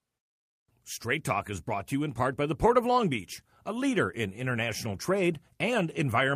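No technical faults can be heard anywhere in this speech recording.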